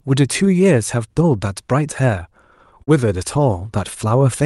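A short concealed packet loss at 2.83 to 2.89 s: about 40 ms of the speech arrived too late to decode, so the receiver extended the preceding sound for 38 ms and crossfaded back, leaving a brief smeared wobble where the real audio should be.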